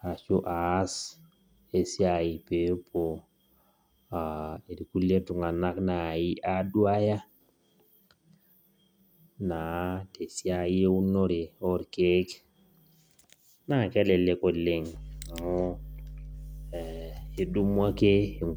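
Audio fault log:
14.95 to 18.56 s, mains hum: right after "kelelek oleng" a steady low drone at 50 Hz comes in and stays to the very end of the speech. It sits roughly 15 dB under the talker. That's the power line leaking into the signal path, a ground loop or a nearby transformer coupling in, which is why it's a fixed pitch that doesn't move with the voice.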